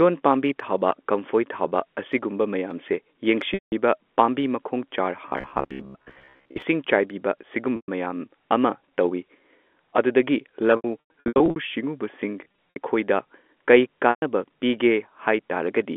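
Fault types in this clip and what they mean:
Packet loss with pitch repetition: Brief held, buzzy tones replace the sound for 60 to 180 ms at a time, and broken, stuttering patches run through 10.76 to 11.56 s. Lost packets were bridged by repeating the last pitch period and fading it out.
Robotic sound from repeated short buffers: From 5.29 to 6.62 s the sound becomes a rigid, metallic buzz at a steady 66.8 Hz. The likely cause is late audio covered by looping the last buffer, about 15 ms long, while roughly half the real audio is skipped.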